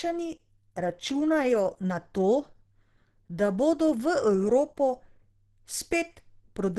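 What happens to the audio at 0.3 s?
At 0.3 s the speech is passing through what is likely Opus compression at a low rate, around 16 kbps, in its hybrid speech mode, present throughout the clip. Nothing survives above 12.2 kHz, and the voice sounds muffled, hoarse and plainly degraded.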